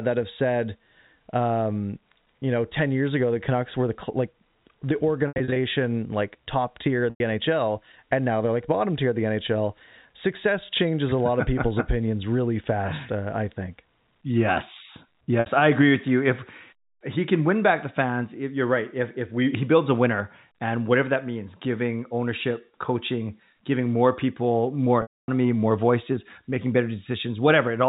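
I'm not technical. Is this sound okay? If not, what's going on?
No. The speech has four short hiccups caused by packet loss with pitch repetition. At 5.28 to 5.56 s (between "were the like the" and "like top tier of"), 7.10 s (after "like top tier of"), 15.40 s (just before "I agree with you") and 25.02 to 25.28 s, pieces of the audio went missing. The receiver covered each gap by repeating the last bit of voice. That repetition is what separates this from ordinary dropouts: in short gaps the voice briefly freezes into a buzzy, held tone, and in longer ones it fades into silence before the speech returns. The telephone-quality sound throughout is simply the phone line's normal narrow range.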